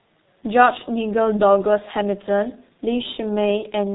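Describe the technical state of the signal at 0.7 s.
At 0.7 s the speech carries heavy G.723.1 codec damage, as it does throughout: nothing above 4 kHz, muffled hoarse tone, smeared consonants, bitrate sounding near 6.3 kbit/s, unlike plain band-limiting's clean dullness.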